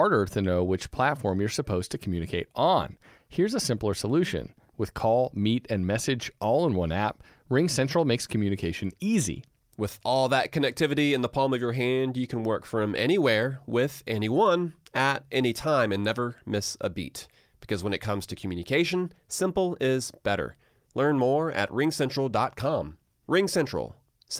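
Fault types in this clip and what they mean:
No faults can be heard anywhere in this recording.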